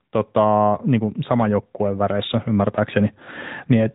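From start to finish the speech carries AMR narrowband mobile codec damage, plainly audible, with a character that fits a rate near 10.2 kbps. Sampling at 8 kHz removes everything above 4 kHz, and the pulse-driven vocal-tract model gives the voice a buzzy, synthetic, telephone-like quality.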